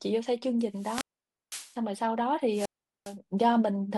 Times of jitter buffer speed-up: none

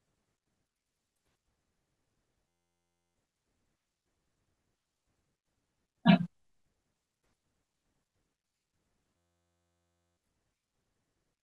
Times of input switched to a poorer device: none

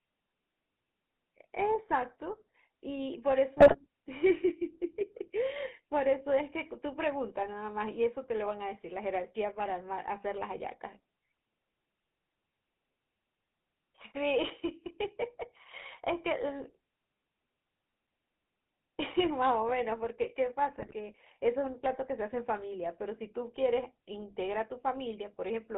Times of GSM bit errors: 3.58-3.79, 20.78-20.94

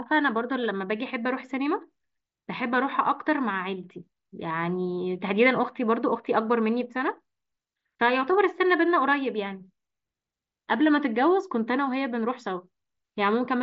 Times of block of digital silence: none

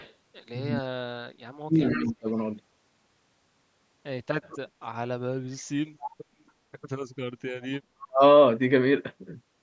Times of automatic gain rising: none

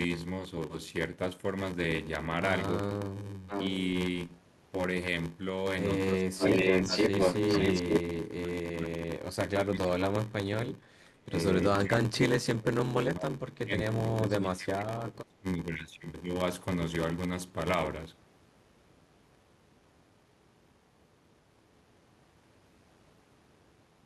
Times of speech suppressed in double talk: 6.15-10.36, 10.92-15.70

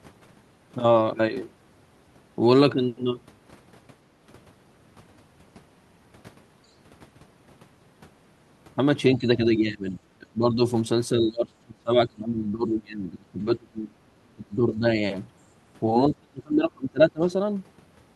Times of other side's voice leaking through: 6.67-6.73

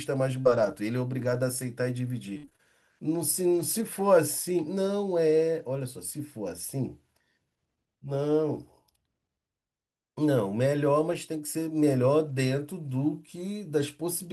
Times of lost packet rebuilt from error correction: 11.13, 12.29-12.35

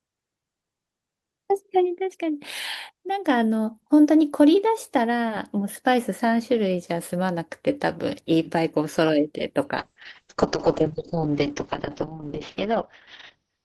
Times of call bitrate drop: 9.79-13.65

